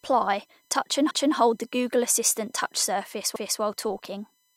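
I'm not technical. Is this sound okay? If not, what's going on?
No. A faint, steady high-pitched USB whine runs throughout, pitched at 1 kHz with its strongest part near 18 kHz. Unlike low mains hum, it's a thin fixed tone from computer power leaking in.

There are also overlapping chunks: at 1.11 to 1.36 s, between "touch and" and "hold the", and at 3.36 to 3.61 s, after "assistant touch surface", a quarter-second piece plays twice. Nothing is missing, as it would be in a dropout. Instead you hear a stutter where 2-second blocks join.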